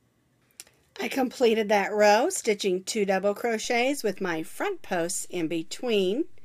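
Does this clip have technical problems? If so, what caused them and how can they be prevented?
Yes. A low thump at 3.65 s marks a DC step: the waveform's zero line jumps by about −40 dBFS and stays offset through the end. Prevent it with a DC-blocking high-pass filter and stable converter calibration.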